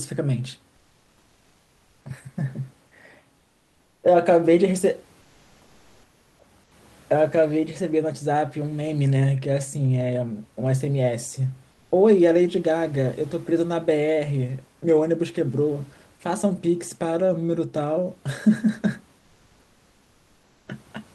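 Speech with room noise sitting about 36 dB below the voice has its background in the pauses replaced by comfort noise at 0.77–2.05 s, 3.39–4.03 s, 5.21–6.39 s, 6.63–6.71 s and 19.19–20.67 s. Each time, the room's real background gives way to a smooth, uniform noise about 1 to 5 dB quieter. On a spectrogram these gaps show as flat, evenly speckled blocks with no fine structure, and on a waveform as a slightly thinner, perfectly steady band. The likely cause is Opus discontinuous transmission (DTX) halting the stream while no speech is detected.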